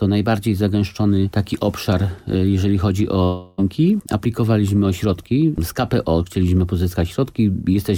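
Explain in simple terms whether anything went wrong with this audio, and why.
A long network dropout runs from about 3.23 to 3.60 seconds. For roughly a third of a second, the last bit of sound before the gap is stretched out into a fading buzz instead of real audio, and then the clip picks up again. The likely cause is that the audio stopped arriving over the connection, so the player filled the hole with a guess. About 0.34 seconds of the original sound never came back.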